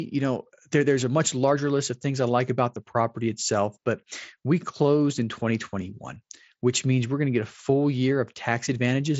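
Nothing here calls for attention, just speech coming over what sounds like a wideband Bluetooth headset link using mSBC, with the top end rolling away a little below 8 kHz as that codec does.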